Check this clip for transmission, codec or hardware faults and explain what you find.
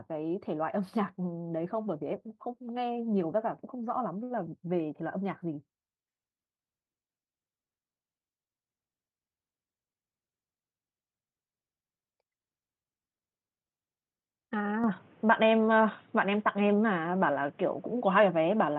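Two faults stand out in this speech recording, carried over an Opus call path whose band reaches about 12 kHz before the change near the end.

From 4.23 to 4.32 s there is a short stall from a late packet. A packet arrived too late, the jitter buffer ran dry, and the receiver held the last sound for about 68 ms until the data came in. It then resumed from the same point, so the speech is stretched with a slight buzz or dip, but no syllable is skipped. That separates it from packet-loss concealment, where material is actually missing. Everything after it also plays about 68 ms later than before.

From 14.84 s to the end, the sound turns dull or boxy at once, with nothing above 3.8 kHz. The likely cause is that the input switched to a poorer device, such as another microphone or a headset in call mode. Its own noise appears, sitting roughly 30 dB below the speech, and the level shifts by a few decibels, with no silence at the changeover. 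A codec bandwidth drop would narrow the band too, but it would not bring a new noise floor or a level step with it.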